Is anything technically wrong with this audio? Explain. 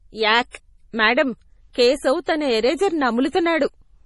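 Yes. Throughout the speech, the sound is watery and swirly, and the upper frequencies stop abruptly at about 11.5 kHz. This is likely heavy MP3 compression, and the damage fits a low bitrate of roughly 32 kbps. When the encoder runs short of bits, it discards everything above a fixed cutoff and zeroes weaker frequency lines, which then flicker on and off from frame to frame. On a spectrogram this shows as a hard horizontal ceiling at 11.5 kHz, with patchy, blotchy gaps below it where detail comes and goes.

There is also pre-echo at three points. The first runs from 0.51 to 0.54 s (39 ms) just before "మేడమ్ కేశవ్ తన ఎరేజర్". The second runs from 1.73 to 1.75 s (20 ms) before "కేశవ్ తన ఎరేజర్". The third runs from 2.24 to 2.27 s (34 ms), between "మేడమ్ కేశవ్" and "తన ఎరేజర్". In each case, the coding noise sized for a sharp onset spreads backward across its transform block into the quieter moment before it. 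This is heard as a brief hiss ahead of a softened, smeared attack. On a waveform, a thin haze of noise leads each onset. On a spectrogram, faint broadband smudges sit just before the transient.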